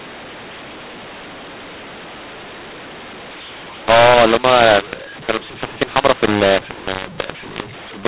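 A speech recording carried over G.711 telephone coding, band-limited to below 4 kHz, suffers a mu-law and A-law mix-up from start to finish: samples encoded as A-law are decoded as mu-law. Because the two logarithmic curves disagree, loudness is scrambled, with some levels inflated and others shrunk, and the quietest samples are pushed well above silence, so gaps fill with hiss. Unlike clipping, the harsh distortion runs through soft passages too.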